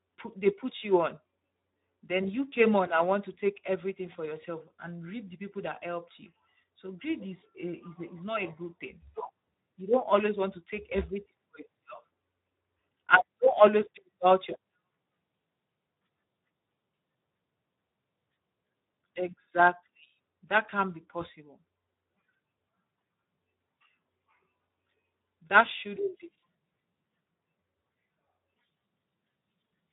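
Speech running through the Speex codec for the whole clip, with plainly audible damage: a hoarse, noisy texture from starved excitation coding, which fits a rate near 11 kbps. A spectrogram shows nothing above 3.8 kHz, a flat ceiling across the entire clip.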